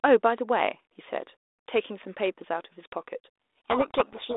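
Codec payload misread, from 3.58 s to the end of the clip: the speech is buried in harsh distortion. The bit order of the G.726 code words no longer matches between the two ends, so the decoder applies each difference value with its bits scrambled, and the adaptive predictor drifts away from the real signal. Before this the speech has light coding damage and a 300 Hz to 3.6 kHz telephone band, which fits 32 kbit/s G.726.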